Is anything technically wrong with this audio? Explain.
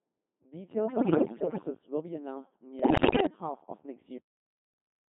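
Yes. The whole clip sounds robotic and buzzy, squeezed into a narrow band of about 150 Hz to 3.6 kHz. That is the Codec 2 vocoder at a rate that fits its 2.4 kbit/s mode. Only pitch, voicing, energy and a coarse spectral envelope are transmitted, and the decoder rebuilds the speech from sine waves, so the original waveform is lost and heavy synthetic damage results.

From 0.86 to 1.70 s and again from 2.80 to 3.26 s, the voice lurches in pitch and loudness and dissolves into warbles, bleeps and gibberish. These are bit errors on digital voice radio, with roughly one bit in ten corrupted. At this low rate each flipped bit alters a whole frame's pitch, level, voicing or spectral shape.

At 4.18 s the speech stops mid-sound and drops straight to digital silence with no decay, leaving the final second empty. This is a cut-off end: the closing buffers were never written or played out, so the sound is truncated rather than allowed to fade.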